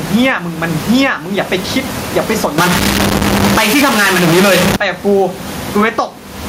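From start to finish the speech shows gain pumping: the room background, normally about 31 dB below the voice, swells up in every pause and sinks under each loud syllable, with the level swinging by around 20 dB. The likely cause is input gain set far too high, with a fast limiter or compressor clamping it on peaks. Unlike a noise gate, the gaps rise rather than falling silent, and the voice sounds squashed.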